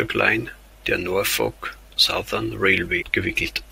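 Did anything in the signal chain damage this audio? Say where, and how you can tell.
Yes: a brief glitch at 3.01 to 3.03 s, damaged data in a compressed stream, where the codec decoder lost frame sync.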